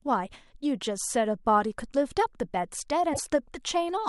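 Damaged data in a compressed stream hits the speech from 3.10 to 3.21 s, a disruption of about 110 ms. A stretch of the encoded bitstream there is corrupt, so the decoder misreads or rejects those frames, loses its place in the stream and has to hunt for the next valid frame header before normal decoding resumes. The result is a short chirp, squawk, click or hole cutting into the speech.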